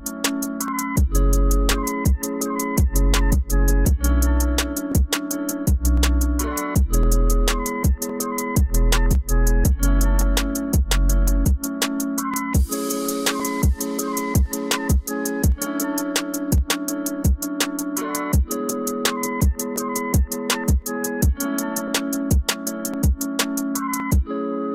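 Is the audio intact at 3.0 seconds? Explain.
No. From 0.68 s to 24.0 s, clicks recur every 1.06 s, likely clock drift buffer slips: mismatched device clocks periodically drop or repeat a few dozen samples.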